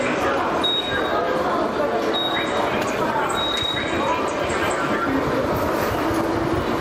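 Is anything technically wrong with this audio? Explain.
Yes, there's gain pumping throughout: the gain swings by around 5 dB, pulled down on loud sounds, likely from excessive input gain hitting a fast limiter.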